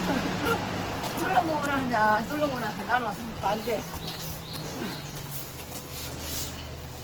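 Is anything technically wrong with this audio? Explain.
Yes. All the way through, this everyday sound clip carries Opus compression, likely from the codec's CELT music mode. There's no muffling, and content still reaches about 20.2 kHz, but tonal parts come across noisy, rough and grainy. When bits are short, CELT holds each band's energy and patches the detail by folding lower bands or injecting noise. Here the damage is plainly audible, which fits a low rate of around 16 kbps.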